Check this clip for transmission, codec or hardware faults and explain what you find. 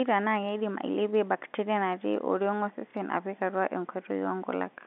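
One transmission fault stands out in the speech. From 2.91 to 2.94 s there is packet loss with the last packet repeated. About 30 ms never arrived, which fits one lost packet, and the receiver replayed the previous chunk. A single repeat like this sounds like a small blip. The narrow band, roughly 200 Hz to 3.6 kHz, comes from G.711 telephone coding.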